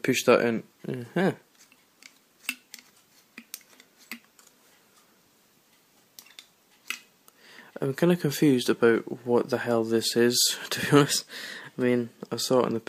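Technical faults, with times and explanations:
1.21 to 2.67 s and 11.00 to 12.26 s, drift correction step: the sound suddenly runs about 5.9% fast and rises roughly a semitone (99 cents), then snaps back to normal. This is likely clock-matching software changing the playback rate in one jump to drain its buffer.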